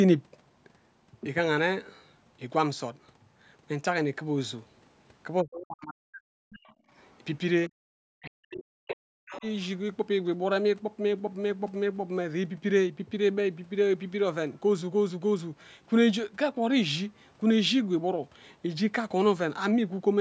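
From 5.43 to 6.51 s the speech sinks by roughly 40 dB, most likely speech suppressed in double talk: with both sides talking, the echo canceller turned everything down. From 6.52 to 7.16 s a faint second voice, about 25 dB under the speech, comes through, likely the other side's voice leaking through from the loudspeaker into the microphone. Within that stretch, at 6.79 to 6.90 s, the room sound briefly drops by about 19 dB and returns. This is background gated by the echo canceller, which clamped the microphone while the loudspeaker played. The speech dips sharply again from 7.69 to 7.82 s and from 8.21 to 9.44 s, once more likely double-talk suppression. During the second dip, scraps of the far voice, about 20 to 25 dB down, slip through at 8.24 to 8.31 s, 8.88 to 8.94 s and 9.30 to 9.41 s.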